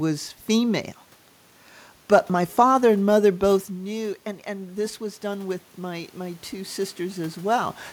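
Around 3.5 s the talker drops away from the mic, the input falling by about 11 dB. From 3.68 s to 7.81 s automatic gain rising kicks in: the AGC slowly pushes gain up by about 9 dB, so the voice and the room noise swell back together.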